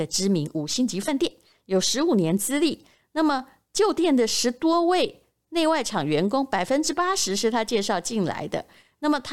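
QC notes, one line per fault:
1.07 s, compressed frames skipped: the speech jumps forward by about one frame, so around 20 ms of sound never plays, which fits a codec frame length of 23.2 ms. The frame was either missing from the stream or rejected by the decoder as corrupt, so playback resumes at the next good frame.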